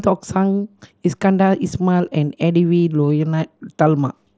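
Speech with no technical faults present. It comes through a Bluetooth mSBC headset codec working as intended, which holds the sound to the wideband range up to 8 kHz and leaves only a light grainy texture on the louder moments.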